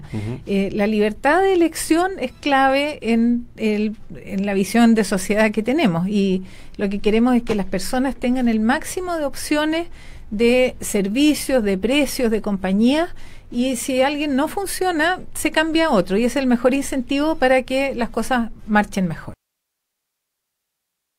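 At 7.49 s, a brief burst of loose connector crackle lasts about 50 ms, until 7.53 s. A worn or dirty contact briefly lost and regained connection. That chopped the signal in rapid, uneven bursts. It sounds like a short, ragged scratch.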